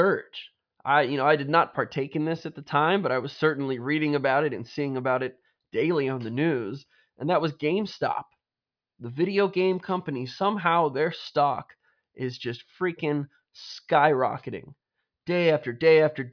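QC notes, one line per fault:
No faults found in the speech; nothing to log.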